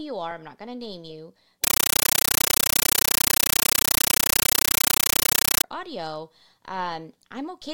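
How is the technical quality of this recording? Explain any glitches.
The recording has one serious glitch: a compressed stream played as audio, from 1.64 s to 5.64 s. For those four seconds, an undecoded Dolby Digital (AC-3) bitstream is being treated as ordinary samples, and the density of the noise fits a high-bitrate stream. Each data frame becomes a burst of roughly 9.33 ms of noise followed by silence, repeating 31.25 times a second. In place of the speech you hear a very loud, harsh, chattering static.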